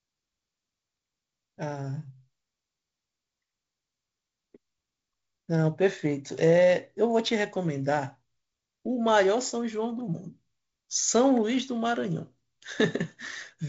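Speech over G.722 wideband telephone coding, with content reaching to about 7.7 kHz and the slightly noisier lower band that fits the 48 kbit/s mode, and no fault to report.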